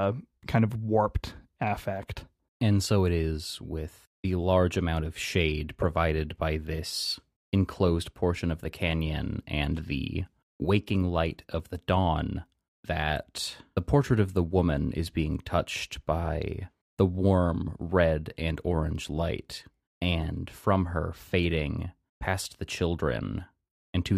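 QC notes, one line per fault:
No faults heard in the speech; nothing to log.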